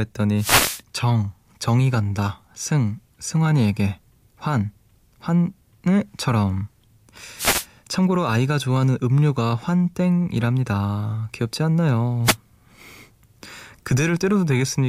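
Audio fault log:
0.36–0.82 s, 7.36–7.66 s, 12.24–12.36 s: wireless microphone noise hit. Three short bursts of swishing static cover the speech as the FM radio link fades, when reflected signals briefly cancel the direct one. The receiver's own noise surges up and drops away again. Unlike a digital dropout, the sound is not cut to silence but buried under hiss that swells and recedes, and the voice returns intact as the signal recovers.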